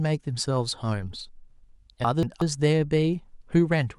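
At 2.04 s the speech turns briefly jumbled until about 2.42 s, a case of chunks out of order. A chunk of roughly 0.19 s arrived or was written one chunk late, so it plays after the chunk that should have followed it. That swap leaves three hard joins around a garbled moment. Unlike a dropout or a repeat, no audio goes missing and none is played twice. Everything is present, only in the wrong sequence.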